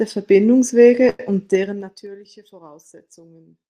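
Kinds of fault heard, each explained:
Short stall from a late packet: around 1.09 to 1.32 s a packet turned up late, the jitter buffer ran dry, and the receiver held the last bit of speech for about 98 ms. Nothing's lost; it just sounds briefly frozen, and everything after arrives later.
Zipper noise: from about 1.47 to 2.15 s the level drops in coarse 3 dB jumps, roughly ten a second, taking it down by something like 25 dB. Each unsmoothed jump leaves a tiny click, so you hear a zippy ticking riding on the fade.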